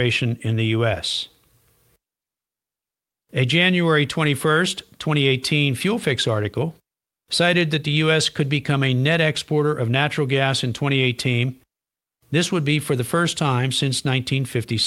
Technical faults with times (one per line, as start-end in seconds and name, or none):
none